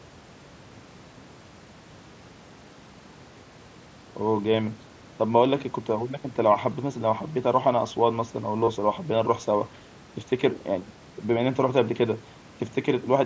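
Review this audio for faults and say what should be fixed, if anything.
Concealed Bluetooth headset packet loss occurs at 7.34 s, a single 7.5 ms gap that is nearly hidden, and at 8.62–8.68 s, where 37.5 ms is lost within 60 ms. The receiver repeats recent waveform, giving a brief buzzy tone and slight warble as audio resumes. Keeping the headset close to the phone and away from 2.4 GHz interference would reduce these radio dropouts.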